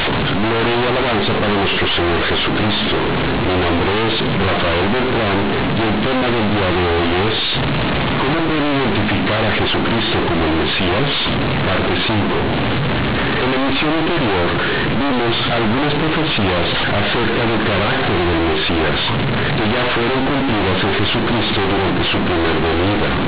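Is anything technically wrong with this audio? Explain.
Yes. Throughout, companded audio is read as linear. Unexpanded A-law bytes make quiet sounds as large as loud ones. The speech turns loud and buzzy, with noise in pauses.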